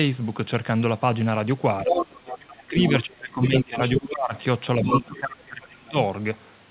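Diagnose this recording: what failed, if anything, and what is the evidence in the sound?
Speech suppressed in double talk at 1.84–1.95 s, 2.46–4.33 s and 4.82–5.96 s, in the call processing stage. The speech dips by about 10, 25 and 30 dB while a second voice overlaps it. The echo canceller likely could not separate the talker from loudspeaker echo and attenuated both.

Other side's voice leaking through at 1.88–2.45 s, 2.83–3.04 s, 3.56–4.06 s and 4.83–5.06 s. The second voice ranges from about level with the speech to about 15 dB below it. The far end, played on the loudspeaker, was likely left incompletely cancelled in the microphone signal, all within a band stopping at 4 kHz.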